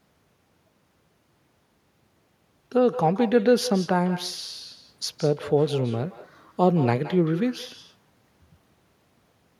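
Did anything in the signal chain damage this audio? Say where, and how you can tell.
Yes. The call-processing stage at the far end let an echo with no canceller through: the remote loudspeaker's output was picked up by its microphone, and nothing subtracted it before it travelled back. Throughout the speech, every phrase is followed by a faint, thinner copy of itself, roughly 150 ms later and about 15 dB below the direct signal. That delay is the network round trip, so the talker's own speech returns as a trailing shadow.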